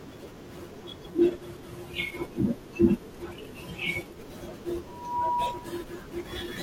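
From 1.08 to 4.2 s the receiver loses its digital signal and blends to the station's FM broadcast over about 100 ms. This is digital radio blending to analogue: faint hiss, roughly 45 dB down, appears, and the level dips about 1 dB until it blends back.

From 4.87 to 5.84 s a microphone picks up its own loudspeaker, and the loop gain at 968 Hz exceeds one. The result is loudspeaker feedback squeal: a single tone swells over roughly a third of a second to sit about 5 dB above the speech.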